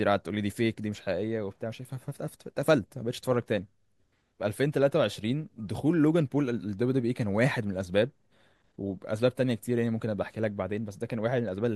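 Nothing in this speech recording stands out as a technical problem, so there's no fault to point to at any moment.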